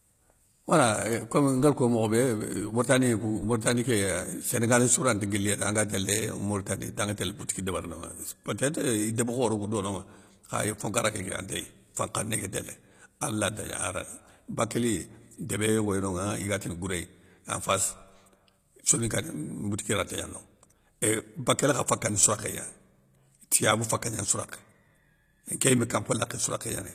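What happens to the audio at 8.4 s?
At 8.4 s the speech carries the HE-AAC compression heard throughout the clip. The treble appears to be rebuilt from copied lower bands, which fits roughly 24 kbps. Nothing remains above 14.9 kHz. S sounds come out gritty and metallic, likely from spectral band replication.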